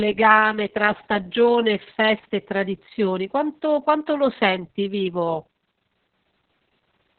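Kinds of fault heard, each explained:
Opus voice compression, throughout: nothing above 4.2 kHz survives, and coarse narrowband SILK coding, fitting a very low bitrate, leaves the speech muffled, hoarse and robotic.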